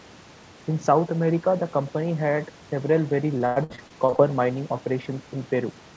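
Repeated packet loss (robotic sound) from 3.38 to 4.20 s: eight gaps, the longest about 99 ms, are patched by extending earlier sound, leaving a choppy stretch with pieces missing.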